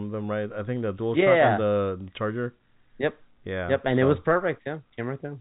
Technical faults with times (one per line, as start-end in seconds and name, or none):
none